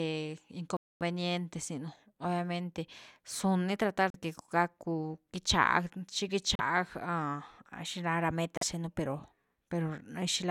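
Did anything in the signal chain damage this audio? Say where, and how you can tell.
Yes. The speech drops to silence at 0.77–1.02, 4.10–4.16, 6.55–6.61 and 8.57–8.63 s, then resumes. This is likely a Bluetooth stall, where the wireless playback buffer ran dry.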